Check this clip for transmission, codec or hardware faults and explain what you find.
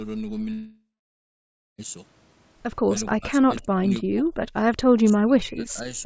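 Two kinds of fault are audible: one long network dropout near the start and two stretches of speech suppressed in double talk later on. The band above 8 kHz is empty throughout, which fits a G.722 wideband call path.

Long network dropout, 0.53 to 1.81 s: Packets most likely stopped arriving for about 1.26 s, and the receiver concealed the gap. The last sound stretches into a fading buzz, then about 0.94 s of near silence before speech resumes with that section gone.

Speech suppressed in double talk, 3.12 to 4.26 s and 4.91 s to the end: The echo canceller likely mistook this talker for far-end echo while both sides spoke, and clamped the signal. Speech dips by up to about 30 dB in the first stretch and about 35 dB in the second.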